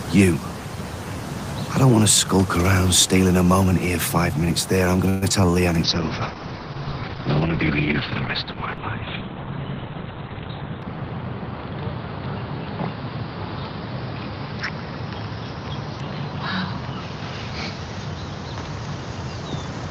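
At 5.09 s a call audio freeze begins, likely caused by packets stalling in transit until the jitter buffer ran dry. For about 125 ms, to 5.24 s, the receiver stretches the last sound into a fading buzz or hiss. When the audio resumes it picks up where it stopped, so nothing is lost, but the stall adds about 125 ms of extra delay to everything that follows.

Immediately afterwards, from 5.30 to 5.32 s, comes a short concealed packet loss. Here roughly 40 ms of audio never reached the decoder in time, and the receiver bridged it with only a few milliseconds of extrapolated sound before blending back into the real stream. The result is a quick smear or wobble with a small piece of the sound dropped out. It also pulls the delay back by about 40 ms.

From 5.84 s to the end, a call bitrate drop sets in. The bandwidth estimate collapsed, and the encoder was cut from 32 to 7 kbps. At that rate Opus codes coarsely and shrinks the audio band from 20 kHz to about 4 kHz. 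The sound becomes muffled, rough and somewhat watery, losing all its top end. The lowest rate holds for about 4.6 s within that stretch.

Between 10.04 and 10.78 s there is a jitter buffer speed-up. The buffer had built up more audio than its target, so the receiver trimmed short pitch-period pieces again and again, removing roughly a tenth of a second in total. Playback runs at about 112% speed with the pitch unchanged, and that passage sounds noticeably hurried against the timing around it.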